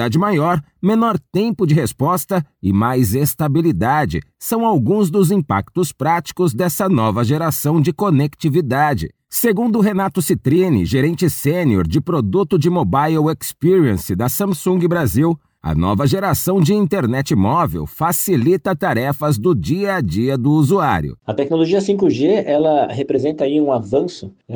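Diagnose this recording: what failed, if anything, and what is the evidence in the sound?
Nothing in the recording points to a failure at any stage of the chain. No event in the sound calls for a diagnosis.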